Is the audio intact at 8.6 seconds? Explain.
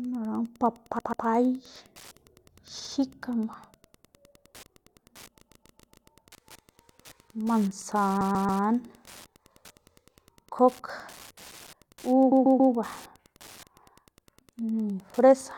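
No. From 8.20 to 8.62 s there are repeated frames: a block of about 139 ms of compressed audio got sent or written more than once, so it plays three extra times. That's a stutter, and it stretches the clip by 418 ms. Underneath all of it there's Wi-Fi interference: a nearby radio's beacon, every 102.4 ms, gets rectified by the audio circuit. It comes through as a steady tick roughly ten times a second, sitting around 30 dB below the signal.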